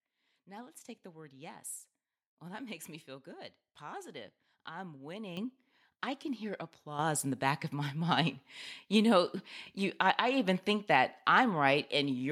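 At 5.37 s, just after "feel good positive I'm", and again at 6.99 s, after "I can hear" and before "in the back of", the microphone volume stepped up. Automatic input-gain control raised the level about 9 dB, then about 7 dB. Voice and background jump abruptly together and stay up, unlike a speaker moving closer.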